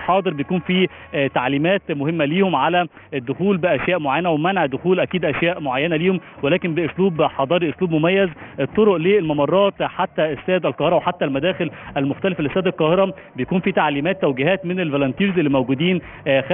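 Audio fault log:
Throughout, aliasing: the audio was taken down to a much lower sample rate, which fits a drop to 6 kHz, with no filter first removing content above the new 3 kHz limit. Everything higher folds back below 3 kHz as false, unrelated tones, roughly 15 dB under the wanted sound. Bright, hissy detail comes out gritty and metallic, and energy piles right up against the 3 kHz band edge.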